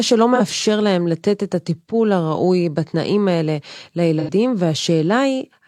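Speech, with two short dropouts from AAC frame loss with concealment. The first runs from 0.35 to 0.41 s. It covers about 43 ms, which fits one lost frame. The second runs from 4.19 to 4.30 s and covers about 85 ms, which fits two frames. In both, the decoder had no data and rebuilt the gap from the last good spectrum. That makes each patch sound smeared, noisy or phasey.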